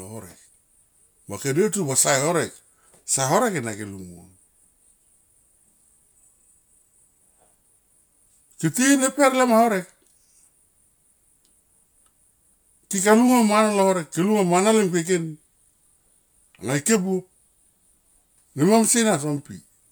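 No faults turn up anywhere in this speech recording, with nothing to flag at any point in it.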